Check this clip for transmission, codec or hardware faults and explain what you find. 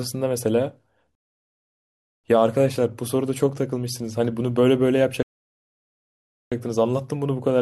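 The speech is interrupted twice by a rebuffering stall, at 1.15 to 2.24 s (about 1.09 s) and at 5.23 to 6.52 s (about 1.29 s). Playback starved of downloaded data, so the sound halts into silence and then resumes exactly where it stopped. The waveform shows flat silent gaps and the spectrogram shows blank columns, with no audio lost.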